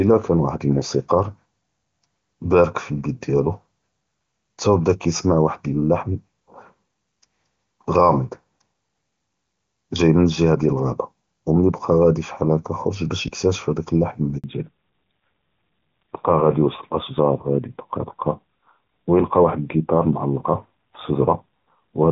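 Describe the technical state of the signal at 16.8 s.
At 16.8 s the signal is in a fallback to narrowband, which begins at 14.44 s and runs to the end of the clip. The call has left its wideband HD Voice coding, clear up to that point, and switched to a narrowband codec. Nothing above 4 kHz survives, so the speech turns duller and rougher. The change is consistent with a drop from AMR-WB at about 23.85 kbit/s to AMR-NB at about 7.4 kbit/s.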